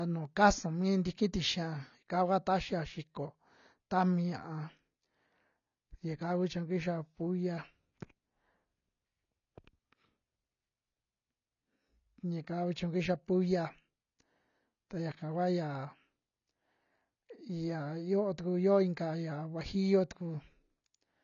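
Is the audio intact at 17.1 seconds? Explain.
No. At 17.1 seconds the speech carries the same AAC compression damage heard throughout the clip, likely from AAC-LC coding at a low bitrate, with a sound that fits roughly 24 kbps. Short of bits, the encoder coarsely quantises each frame's spectrum and drops the top band, so nothing survives above 6.9 kHz. The speech sounds dull and smeared, with a warbling, fizzy texture on sustained sounds and sibilants.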